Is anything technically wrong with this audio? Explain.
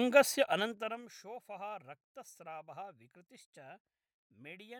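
Yes. The speech has two technical faults.

From 0.51 to 1.13 s there is zipper noise. The level falls by around 20 dB, but not smoothly. It moves in 2 dB steps, about fifteen a second, with nothing easing each jump. Every step leaves a small click in the waveform. Together the clicks form a fast ticking that rides on the speech while the level drops.

From 3.39 to 4.27 s the speech suddenly runs 5.77% fast. Its pitch rises by 97.1 cents, close to a full semitone. Speed and pitch shift together, hold, and then snap back to normal. This is most likely a drift correction step. Software keeping two clocks in line changed the playback rate in a single jump to refill or drain its buffer, instead of adjusting gradually.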